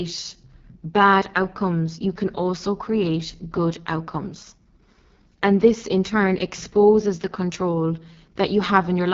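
From start to finish the speech carries the sound of the AMR wideband (HD Voice) codec at heavy damage. Nothing reaches above 7 kHz, and the band from 6.4 to 7 kHz is filled with shaped noise rather than real detail. The coder rebuilds the signal from a pulse-excited vocal tract model, and at this depth it gives a rough, raspy texture, which points to the lowest 6.6 kbit/s mode.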